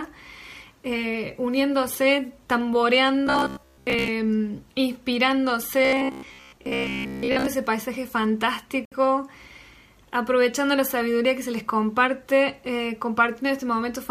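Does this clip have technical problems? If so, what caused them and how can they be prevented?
Yes, there are two kinds of fault. From 3.27 to 4.08 s and again from 5.85 to 7.48 s there's robotic sound from repeated short buffers: a rigid, metallic buzz at about 66.8 Hz sits on top of the audio. That's likely the player running short of fresh data and looping its last chunk. A 66.8 Hz buzz means each repeated slice is about 15 ms long, and most of the material in those stretches is repeats rather than new audio. Giving the audio path a larger buffer or a higher-priority thread would prevent it.

At 8.85 s there's a Bluetooth stall, where the sound drops out to silence for about 65 ms and then carries on. The likely cause is interference delaying packets, so the headphones' buffer emptied and playback waited for the resends to arrive. Keeping the phone close to the headphones, with a clear line between them and fewer competing 2.4 GHz devices nearby, would prevent it.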